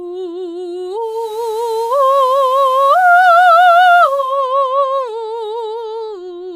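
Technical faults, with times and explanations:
0.95–4.46 s, digital radio blending to analogue: the receiver lost digital and cross-faded over 0.49 s to FM, so hiss rises and level drops about 1 dB. The spectrogram shows a raised noise floor.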